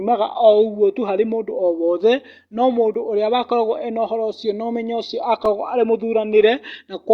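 A speech recording with two blocks of digital silence, at 2.94 s and 5.45 s, lasting about 5 ms and 3.5 ms. At each point the signal drops straight to silence and returns with no fade, so the abrupt edges produce a brief tick rather than an audible gap. Short, hard-edged silent runs like these point to the output buffer not being filled in time.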